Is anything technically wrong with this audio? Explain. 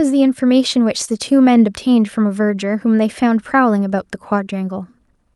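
Yes, there is one short concealed packet loss between 1.05 and 1.09 s. About 20 ms of audio arrived too late to decode, so the receiver stretched the preceding sound to cover the gap and then blended back, leaving a brief smear in the speech.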